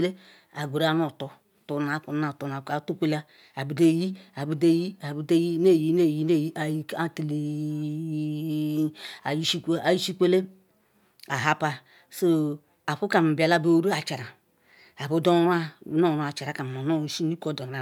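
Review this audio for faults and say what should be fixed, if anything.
Nothing here needs fixing; no faults were heard.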